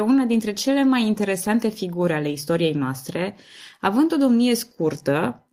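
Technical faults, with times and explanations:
Nothing technical stands out here; the speech comes through without a single audible fault anywhere along the way.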